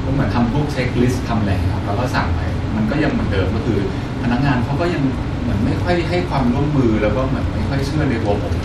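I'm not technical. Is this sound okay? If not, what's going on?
Yes, this speech recording sounds fine, and there's nothing going wrong with it that you need to worry about.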